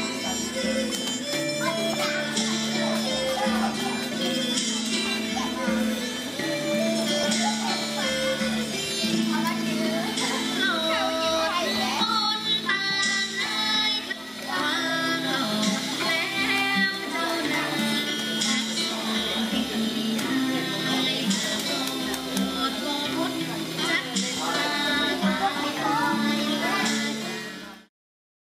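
Five short glitches at 4.12, 7.23, 14.11 to 14.13, 17.96 and 25.62 seconds point to damaged data in a compressed stream. Corrupt bytes make the decoder misread a frame, lose sync and hunt for the next header, leaving a brief glitch each time.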